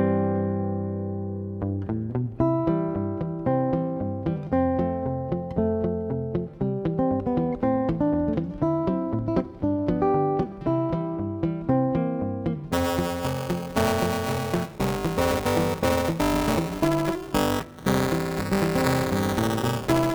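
The write and read positions of the playback ring buffer have drifted into each other, producing buffer tearing from 12.72 s to the end of the clip. Inside each period, roughly a fifth of the buffer still holds audio from a lap earlier, some 5 ms old, spliced in with abrupt edges on both sides. Repeating every period, those joins add a steady robotic buzz near 345 Hz, a rate that fits a 128-sample buffer.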